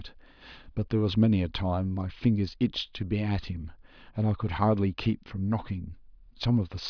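A speech recording with no technical faults to report anywhere in the signal.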